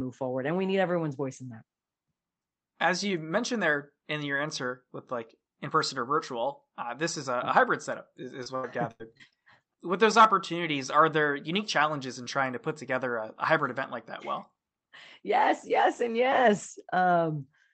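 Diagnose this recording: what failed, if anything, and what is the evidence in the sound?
The network stage failed. Packets went missing repeatedly, and the receiver's concealment kept extending the last good sound to cover each hole. This repeated packet loss (robotic sound) runs from 8.43 to 9.34 s, right after "a hybrid setup is". Five gaps, the longest about 82 ms, leave roughly a quarter of that stretch synthesized. The patched speech turns choppy, with pieces missing, against the call path's 8 kHz band limit.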